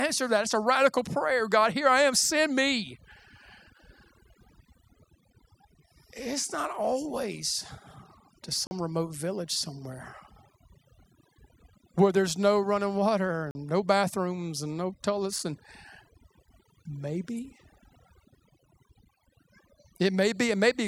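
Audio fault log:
throughout, overdone noise removal: the background drops and breaks into twinkling specks, from bands gated off near the noise estimate, unlike steady codec smearing.
8.67–8.71, 13.51–13.55 and 15.39 s, block of digital silence: 40 ms holes before "remote village somewhere" and between "there's no running water" and "no bathrooms and no", then a 4 ms tick right after it. Each cuts out and back with no fade, unlike a smoothed dropout.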